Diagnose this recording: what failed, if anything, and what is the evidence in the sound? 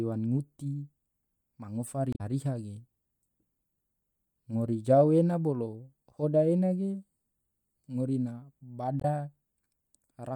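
The failure is at the codec stage: damaged data in a compressed stream. There are two short glitches in the speech, one from 2.10 to 2.21 s, about a tenth of a second long, and a shorter one from 9.00 to 9.05 s. Each one briefly breaks the speech. Corrupted bytes threw the decoder off, so it misread those frames and had to hunt for the next valid frame header before it could resume.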